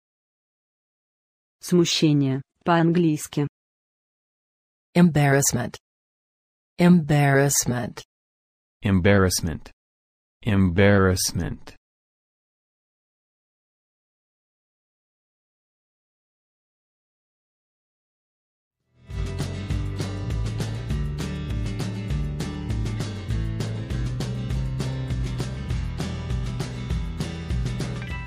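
No technical faults can be heard.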